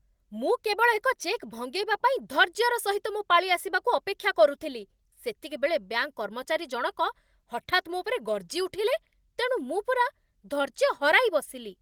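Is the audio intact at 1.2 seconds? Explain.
Yes, the audio is intact at 1.2 seconds, with no dropout, click or other fault at that moment.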